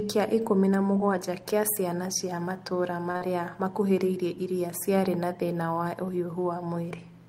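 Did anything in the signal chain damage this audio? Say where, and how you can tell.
Yes, at the jitter buffer: a short stall from a late packet at 3.11 to 3.17 s stretches the last sound 34 ms, seen as frozen, smeared spectrogram bands.

Right after, short concealed packet loss at 3.17 to 3.23 s replaces 40 ms of lost audio with extrapolated sound, leaving a blurred spectrogram patch and a soft waveform seam.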